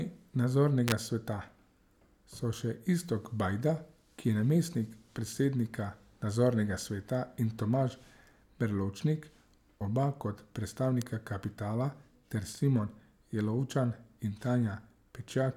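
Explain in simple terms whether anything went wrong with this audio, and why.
Two sharp snaps sit on top of the speech: a louder one from 0.88 to 0.92 s, and a fainter single tick at 11.02 s, between "oba kot" and "kapitala ter". This is an electrical switching spike, likely a nearby switch or motor arcing into the audio line.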